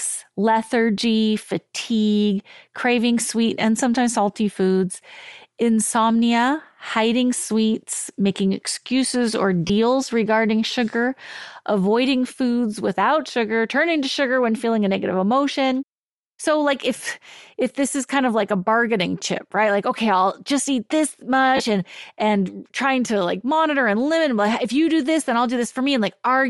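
All the way through, the speech has a breathy, grainy top end, likely from Bluetooth LC3 compression. The upper band gets thinned and noise-filled, which fits roughly 48 kbps with 7.5 ms frames.

At 9.67 s, right after "sweets making excuses or", there's about 22 ms of concealed audio. Then at 21.57 s, after "I'll just eat this", a similar patch lasts about 30 ms. Those are lost LE Audio frames, where the decoder replays the last spectrum with scrambled signs. The lengths match three and four missing frames.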